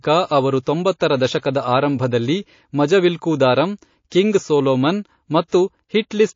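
The whole clip carries MP3 compression damage, likely from encoding at a low bitrate such as 32 kbps. Starved of bits, the encoder drops treble and flickers weak frequency lines, so the speech sounds plainly watery and swirly, with smeared consonant attacks. Pre-echo appears at 0.63 s, 1.40 s and 5.48 s. The encoder, apparently never switching to short blocks, spread each attack's noise backwards: a hiss about 16, 11 and 24 dB up, lasting 36, 34 and 46 ms, blurs each onset.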